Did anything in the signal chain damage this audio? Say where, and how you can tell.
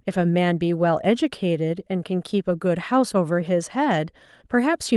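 No, nothing in the signal chain has left audible damage on this speech; the signal reaches the output intact, with no stage betraying a fault.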